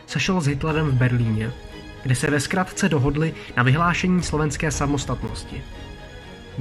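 At 2.26 s and again at 5.28 s there's a gap between chunks: about 13 ms of dead silence dropped in where 3-second blocks join. Nothing's missing, the sound just stops and restarts, a tiny clipped hole at each seam.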